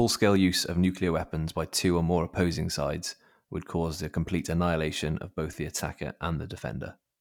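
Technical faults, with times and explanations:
5.76 to 5.83 s, wireless microphone noise hit: right after "annihilation of both the", a brief swish of static lasting about 60 ms is heard. The radio link from the FM microphone momentarily faded as reflected signals cancelled, letting receiver hiss surge through, unlike a digital dropout, which leaves clean silence or a glitch rather than noise.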